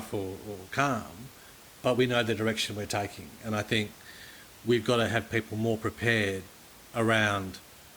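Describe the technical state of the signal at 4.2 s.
At 4.2 s the speech signal is intact, with only the room's own background noise sitting about 23 dB below it.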